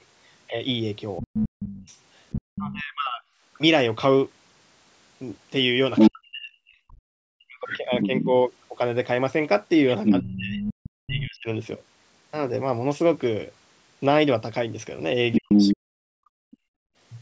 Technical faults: other side's voice leaking through; speech suppressed in double talk; background gated by the echo canceller

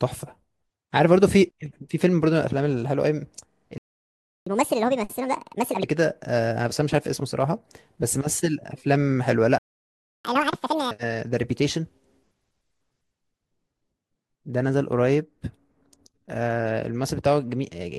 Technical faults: repeated frames; playback stall; catch-up at higher speed

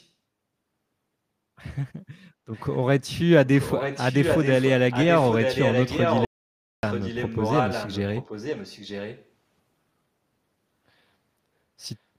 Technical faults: echo leak; audio dropout to silence

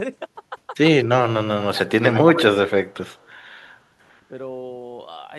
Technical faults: speech suppressed in double talk; echo leak

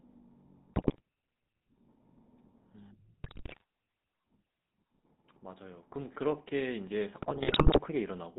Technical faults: GSM full-rate codec; GSM bit errors

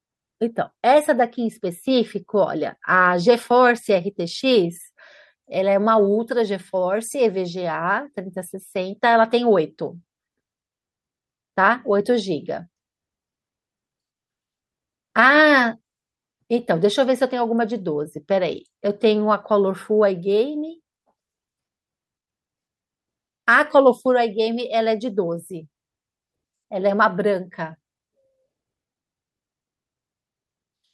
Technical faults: none

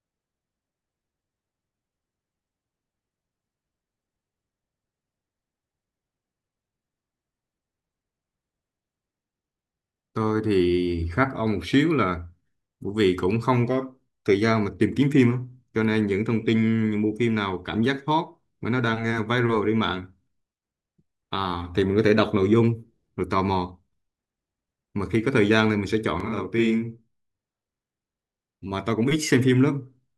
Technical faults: channel delay (doubling)

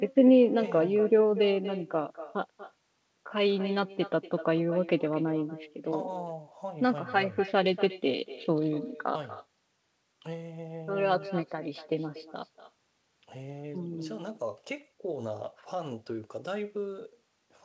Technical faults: echo with no canceller

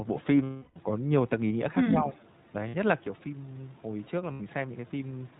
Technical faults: iLBC codec; lost iLBC frames; speech suppressed in double talk; echo leak

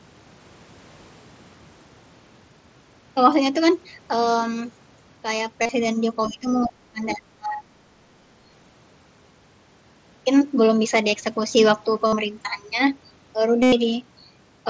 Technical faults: concealed Bluetooth headset packet loss; other side's voice leaking through; speech suppressed in double talk

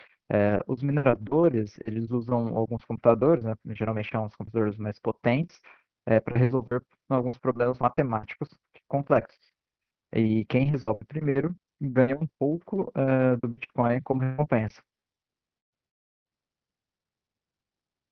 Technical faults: burst of packet loss; lost packet rebuilt from error correction; long network dropout

